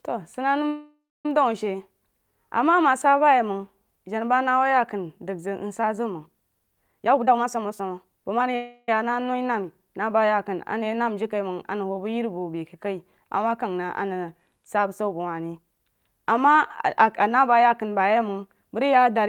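A speech recording in which the sound twice stretches into a fading buzz that ends in silence, at 0.68 to 1.26 s and 8.56 to 8.89 s, before resuming where it stopped, a call audio freeze likely caused by delayed packets emptying the jitter buffer. Speech also rushes at unchanged pitch from 6.88 to 8.46 s (130% speed, roughly half a second removed) and from 15.62 to 16.56 s (108%), a jitter buffer speed-up trimming pitch-period slices to reduce built-up delay.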